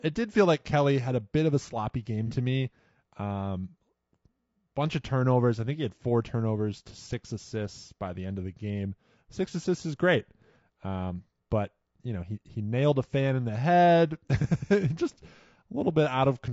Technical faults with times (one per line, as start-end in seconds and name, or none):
0.00-16.53 low-delay AAC compression
2.27-2.31 AAC frame loss with concealment